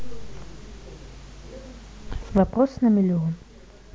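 One channel drops out at 2.38 s and stays out to the end of this speech clip. The level falls abruptly by about 6 dB, likely because one stereo channel was lost, so the mono sum carries only half the shared signal and nothing unique to the missing side.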